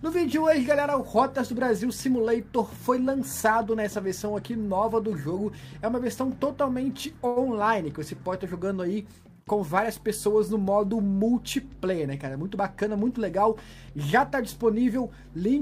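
A packet arrived late at about 7.27 s, the jitter buffer ran empty, and the receiver covered the gap by stretching the last sound for 86 ms until the packet turned up at 7.38 s. This is a short stall from a late packet. Playback resumes exactly where it stopped, so nothing is lost, but one moment of the audio hangs on too long with a faint buzzy or sagging quality. Playback also now runs 86 ms further behind than before.

Later, from 11.85 s to 13.00 s, the buffer was holding more audio than its target, and a jitter buffer speed-up trimmed it back. The receiver repeatedly cut out tiny slices a pitch period or so long, removing roughly a tenth of a second in total. Over that stretch the audio plays at about 107% of normal speed without any change in pitch, which makes it sound slightly rushed.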